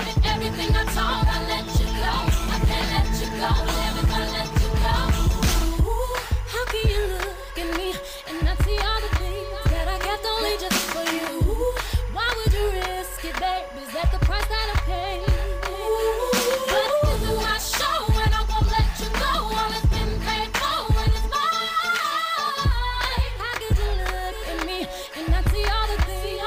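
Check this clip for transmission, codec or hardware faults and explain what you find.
One hardware fault is present: timecode bleed, running for the whole clip. Linear timecode from a nearby track or cable is leaking into the audio path. The code is a square wave that flips between two pitches, near 1 kHz and 2 kHz. It repeats at 25 frames per second. It sits low, roughly 25 dB under the sound. You hear it as a steady chirping warble behind everything, start to finish.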